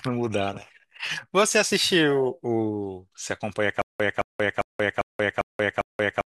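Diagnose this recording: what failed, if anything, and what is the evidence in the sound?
Stutter with silent gaps from 3.82 s to the end: identical 217 ms waveform blocks every 399 ms with flat-line gaps, likely stalled playback replaying its last fragment.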